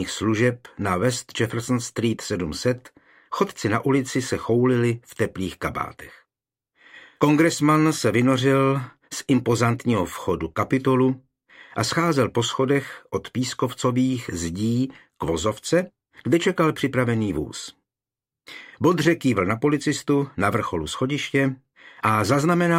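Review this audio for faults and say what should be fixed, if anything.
Nothing here needs fixing, as the signal holds steady throughout with no audible faults anywhere in the recording.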